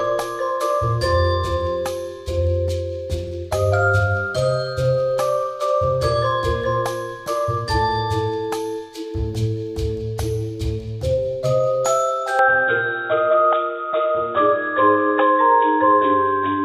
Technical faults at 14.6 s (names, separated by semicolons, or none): input switched to a poorer device